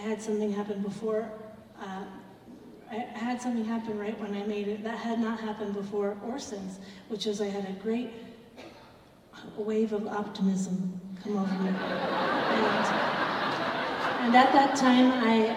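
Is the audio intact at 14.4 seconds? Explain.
Yes, the audio at 14.4 seconds is intact, with no dropout, click, distortion or other fault at that moment.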